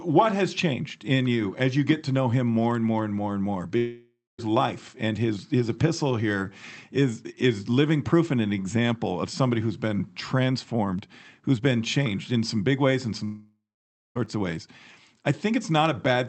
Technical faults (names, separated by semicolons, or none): long network dropout